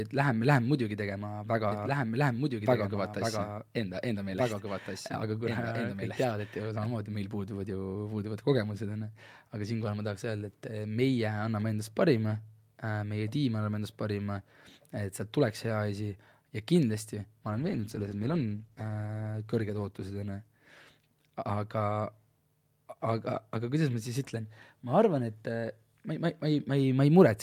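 From 1.72 s to 6.86 s, a doubled audio track appears. It starts after "läheme muidugi tegema väga" and ends before "meil puuduvad". A second full-band copy of the speech trails about a second and a half behind, at about 5 dB quieter. It has no decay or room tone. It cuts in and out abruptly. The likely cause is a second, slower capture path mixing back in.

From 17.5 s to 21.73 s, there is a call bitrate drop. The encoder was starved of bits. The speech turns coarse, watery and dull as the highs are cut. The worst stretch lasts about 1.6 s. The sound fits a fall from around 64 kbps to about 15 kbps.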